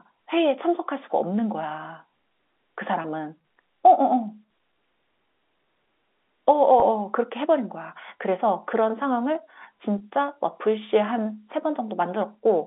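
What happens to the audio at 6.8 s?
At 6.8 s there's a brief packet loss with pitch repetition, running to about 6.82 s. Roughly 20 ms of audio went missing, which fits a single lost packet, and the receiver covered the hole by looping the last pitch period of the speech. Because the gap is so short, it doesn't fade to silence. You get a slightly held, buzzy moment in the narrowband G.711 line sound before the voice carries on.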